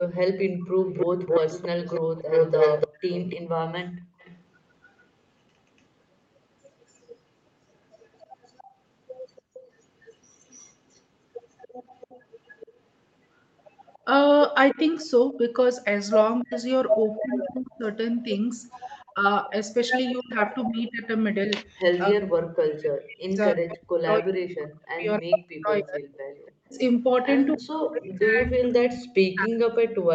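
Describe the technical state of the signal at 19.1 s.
At 19.1 s the speech sits inside a long stretch of speech suppressed in double talk, running from 14.73 s to the end of the clip. The level dips and parts of the speech drop out in pieces, with the deepest cuts reaching something like 40 dB. The likely cause is an echo canceller facing simultaneous talk from both ends. Unable to separate the near talker from loudspeaker echo, it attenuated everything it captured.

Overlapping this moment is a brief echo leak from 19.0 to 19.12 s: a faint, delayed copy of the speech, around 30 dB below the main signal and trailing it by 291 ms. It is short, more a scrap than a sustained echo. It is likely residual loudspeaker pickup on one side of the call that the echo canceller failed to remove, so part of the returned signal was transmitted back into the call.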